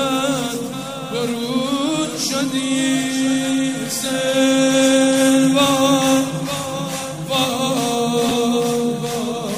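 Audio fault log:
8.29–8.31 s, chunks out of order: a brief jumbled flick. A 10 ms chunk of audio arrived or was written one chunk late, so it plays after the chunk that should follow it. Nothing is missing, but the swapped order puts three hard joins within about 20 ms, where the waveform jumps abruptly between pieces that never belonged side by side. The swapped slice is the garble.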